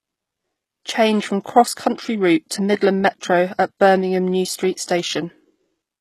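Across the whole speech recording the treble sounds bright but synthetic: s sounds come out gritty and lispy, with a metallic sheen, and nothing reaches above about 12.3 kHz. The damage is plainly audible. This is likely HE-AAC compression, at a setting consistent with a very low bitrate near 16 kbps, where only the lower spectrum is truly coded and the upper bands are regenerated from copies of it, so their harmonics never line up with the real ones.

At 1.44 s a burst of hiss arrives just before a sharp onset, roughly 17 ms ahead of it, and the attack itself lands softened and smeared. This is pre-echo. The transform codec distributed its quantisation noise across the entire block containing that onset, so noise scaled for the loud attack spilled into the quieter instant preceding it, where nothing was there to mask it.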